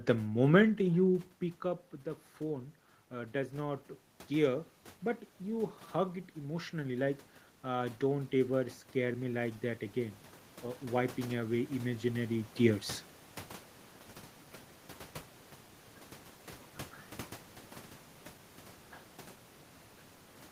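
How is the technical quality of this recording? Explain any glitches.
The recording has one recurring glitch: automatic gain rising, which happens twice.

From 1.62 to 4.76 s, ending just before "but you hug it", the level reaching the automatic gain control fell by about 13 dB when the talker moved back from the microphone around 1 s. The control responded by raising its gain by about 3 dB over roughly three seconds. Voice and room noise swell together in a slow ramp.

From 6.35 to 10.24 s, between "but you hug it" and "uh wiping away imaginary", the gain climbs again by about 5 dB over nearly four seconds. The background noise lifts along with the voice.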